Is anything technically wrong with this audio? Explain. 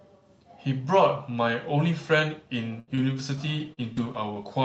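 Yes. From 2.79 to 4.38 s the speech suffers repeated packet loss (robotic sound): audio packets kept arriving late or not at all, and each hole, the longest about 78 ms, was patched by stretching the previous sound, leaving this stretch choppy with pieces missing.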